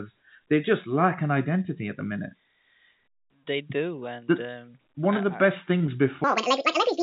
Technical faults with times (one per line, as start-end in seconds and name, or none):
4.94 short concealed packet loss
5.78-5.88 short concealed packet loss
6.24-7.03 section at the wrong speed